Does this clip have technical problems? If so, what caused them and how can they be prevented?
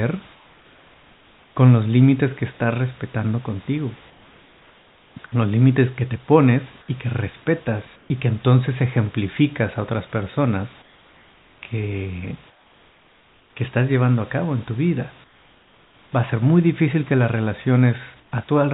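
Yes. In the pauses at 0.34–1.56, 4.1–5.16, 7.96–8.1, 10.82–11.62, 12.5–13.56, 15.24–16.12 and 18.2–18.32 s, the room background turns into a flat, featureless hiss, about 4 to 6 dB quieter, but about 2 dB louder at 7.96 s. This is likely comfort noise in place of the background: the sender's discontinuous transmission stopped sending audio when no speech was detected, and the receiver filled each gap with synthetic noise. Turning off discontinuous transmission on the sending side would keep the real background throughout.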